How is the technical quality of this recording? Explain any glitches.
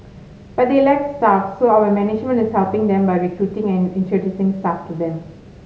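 No technical faults are audible anywhere in this speech recording, so there are no glitches to explain.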